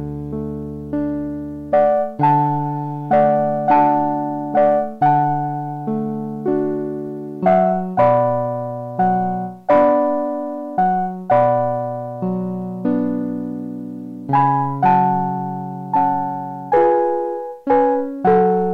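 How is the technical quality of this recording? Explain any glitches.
The technical quality of the recording is sound, with no glitches to explain.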